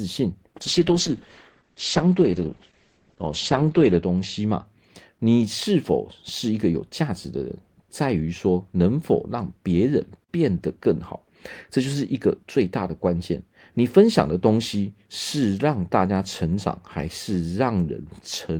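Speech with a call bitrate drop from 0.62 s to 4.71 s. The audio band narrows from about 20 kHz to 8 kHz, and the speech turns rough and watery as the encoder codes more coarsely. That sound fits the call's bandwidth estimate falling and the Opus encoder dropping from roughly 40 kbps to around 9 kbps. The degraded stretch holds at its worst for about 3.35 s before full bandwidth and detail return.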